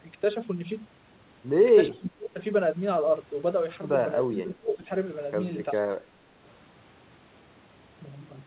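An echo canceller likely mistook the talker for loudspeaker echo during double talk, giving speech suppressed in double talk: the speech dips from 1.88 to 2.39 s (down about 25 dB), 4.28 to 4.91 s (about 15 dB), and briefly from 5.94 to 5.98 s (about 10 dB).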